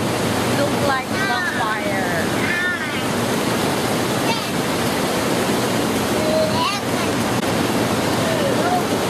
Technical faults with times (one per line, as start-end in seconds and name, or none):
1.47-1.50 corrupt frame decoded
3.00-3.05 corrupt frame decoded
7.39-7.43 corrupt frame concealed